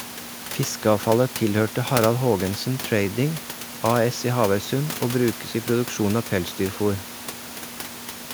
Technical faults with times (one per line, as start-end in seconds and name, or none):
none